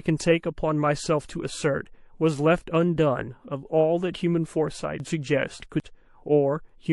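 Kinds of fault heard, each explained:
MP3 compression: Watery, swirling treble and smeared consonant attacks run throughout, likely from low-bitrate MP3 encoding near 48 kbps. It is steady rather than momentary like dropouts.
Chunks out of order: Between 5.0 and 5.8 s, a 200 ms piece plays three chunks late, jumbling the sound. Unlike a dropout, nothing goes missing.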